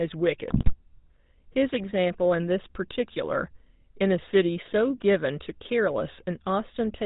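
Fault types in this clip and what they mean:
GSM full-rate codec: the speech runs through the original GSM coder at 13 kbps, which models the vocal tract and excites it with a sparse regular pulse train. Nothing above 4 kHz survives, and the damage is plainly audible as a buzzy, gravelly roughness throughout.
GSM bit errors: from 0.50 to 0.75 s, corrupted bits at about a 5% error rate reach the decoder, scrambling filter, pitch and gain values across a dozen frames. The speech breaks up there into squawks, pops and gargling before recovering.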